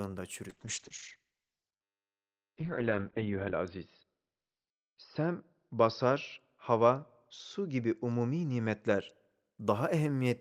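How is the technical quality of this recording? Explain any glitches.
The recording has one sustained quality fault, a call bitrate drop lasting most of the speech. From 0.49 s to 9.17 s the encoder's rate falls from 32 kbps to 10 kbps, bottoming out for about 3.1 s. Coarser coding makes the sound rough and watery, and the audio band narrows from 20 kHz to 4 kHz, so it turns muffled. Unlike packet loss, nothing drops out. The sound degrades continuously, then recovers.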